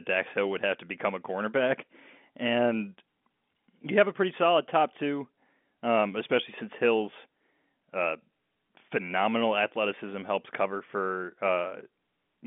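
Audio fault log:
No faults found.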